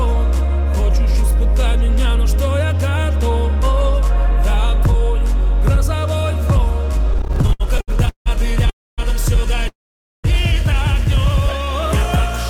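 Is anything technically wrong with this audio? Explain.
Yes, the clip has three kinds of network playback fault.

Repeated stalls (stutter) run from 7.11 to 8.28 s. Packets kept reaching the receiver late, so its jitter buffer ran dry 17 times. Each time, the last bit of sound was stretched to cover the wait, the longest about 170 ms, before playback resumed. Roughly 442 ms, about 38% of that stretch, is filled this way, with nothing dropped. It sounds halting and dragged. A spectrogram shows repeated smeared, flat-topped patches, and the waveform shows held segments fading in the longer gaps.

Call audio freezes occur at 8.70 to 9.00 s and at 9.68 to 10.26 s. The likely cause is packets held up in transit, emptying the buffer until they arrived. The last sound trails off into silence and then continues where it stopped. This inserts about 280 ms, mostly silent for 250 ms, and then about 560 ms, silent for 510 ms. 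The waveform shows a brief decaying tail followed by a flat line, and the spectrogram shows a blank vertical band.

A jitter buffer slow-down runs from 11.40 to 11.66 s. The receiver rebuilt its reserve by repeating single pitch periods many times in a row. This adds 43 ms and plays that section at about 87% speed with unchanged pitch, so sounds are slightly drawn out. On a spectrogram, harmonics keep their spacing but stretch horizontally. The waveform shows near-identical cycles repeated back to back.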